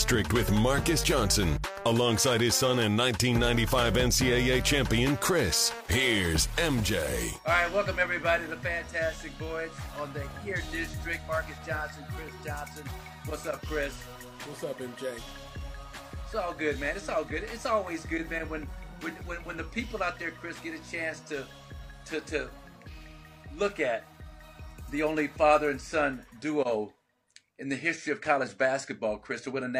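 Nothing is technically wrong with the audio in this clip.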